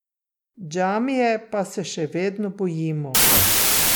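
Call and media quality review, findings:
Wrong sample width, 3.15 s to end of clip (3.95 s): speech collapses into loud noise, original faintly audible beneath, slowed and lowered to 0.75x speed and pitch. Probable decoder/format negotiation fault; fits 32-bit integer samples read as packed 24-bit, misaligning bytes.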